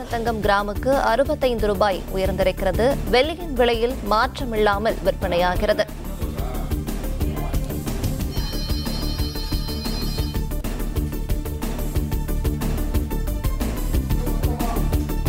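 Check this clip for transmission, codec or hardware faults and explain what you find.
Nothing stood out on listening that would point to a problem with how this audio was sent, encoded or recorded.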